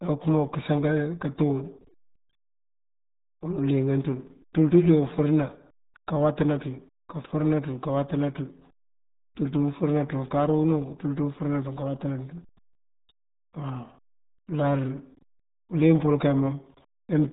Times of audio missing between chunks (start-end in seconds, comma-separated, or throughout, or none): none